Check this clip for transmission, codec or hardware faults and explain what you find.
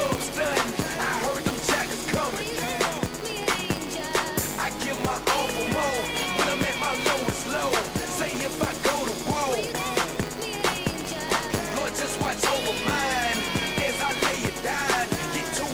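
There is one fault, present for the whole clip: a filter restarted on every block. The filter loses its stored state at each block boundary and restarts from silence, so every block opens with a small transient. These arrive 100 times a second, pointing to 10 ms blocks, and produce a buzz at 100 Hz whose loudness rises and falls with the signal. A waveform would show evenly spaced spikes every 10 ms. A spectrogram would show thin vertical striations and harmonics stacked at multiples of 100 Hz.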